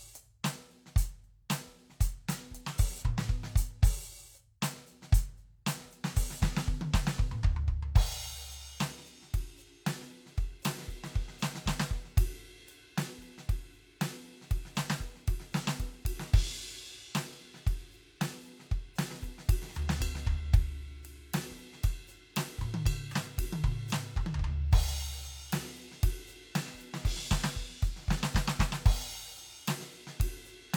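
No technical faults can be heard anywhere in the music.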